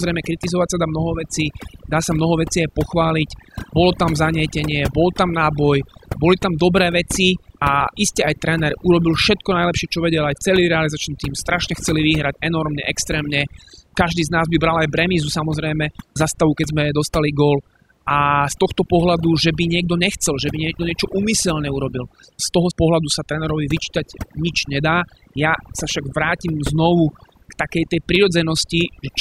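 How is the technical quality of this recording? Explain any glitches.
Technical quality suffers from overdone noise removal throughout. Aggressive noise reduction mutes frequency bands near the noise estimate. Quiet speech details vanish too. Background drops and breaks up into twinkling specks.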